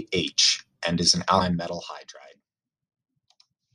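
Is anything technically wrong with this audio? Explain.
Yes. At 1.40 s, between "and is an" and "metal hydride", compressed frames were skipped. A chunk of roughly a third of a second is missing, which fits about ten frames of 23.2 ms. The audio jumps straight ahead past the missing frames.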